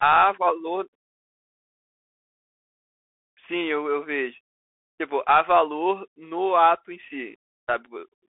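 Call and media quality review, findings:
Bluetooth CVSD headset codec, throughout: band limited to roughly 200 Hz to 3.5 kHz, nothing above 3.8 kHz; scratchy sibilants, granular hiss, slope-overload distortion, which fits 64 kbps CVSD.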